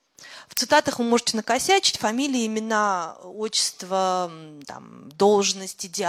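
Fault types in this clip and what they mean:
Uninitialised buffer: a 0.73 ms block, fitting 32 samples, played before audio was written, so stale memory is heard as a loud crack at 0.57 s, just before "вы можете накосячить фамилии".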